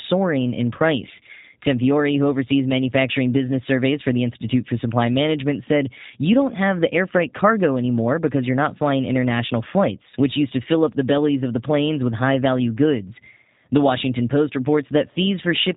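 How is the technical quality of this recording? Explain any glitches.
The quality is limited by heavy low-bitrate voice coding across the whole clip. The speech runs through a G.729 codec from start to finish, and the damage is plainly audible. The codec doesn't carry the waveform itself. It sends a compact model of the voice, a vocal tract filter, a pitch predictor and a few pulses in each 10 ms frame, which fits an 8 kbit/s stream. Nothing above 3.8 kHz survives, so the speech sounds muffled and telephone-like, with a rough, slightly synthetic edge.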